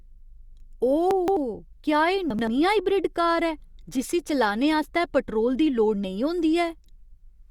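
A jumbled stretch at 1.11–1.37 s and again at 2.30–2.48 s, just before "हाइब्रिड कार ऐ जिस्सी": chunks out of order, with 85 ms blocks of speech played late, after the audio that should follow them.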